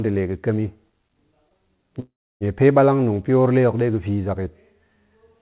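At 1.49 to 1.54 s there is a short stall from a late packet. The jitter buffer ran dry for a moment, and the receiver stretched the last sound by about 17 ms until the packet turned up, then carried on with nothing lost. It is heard as a faint hold or buzz on the sound. A spectrogram shows a brief smear of repeated, flattened harmonics, and the waveform shows a few near-identical cycles in a row.

From 2.00 to 2.44 s comes a call audio freeze, likely caused by packets being held up in transit until the jitter buffer emptied. The receiver bridged about 408 ms: first the last sound is continued as a fading buzz, then roughly 300 ms of silence follows before the audio resumes where it stopped, with nothing missing. On a spectrogram, banded energy trails off into a blank gap. Across the G.711 call path everything sits below 4 kHz.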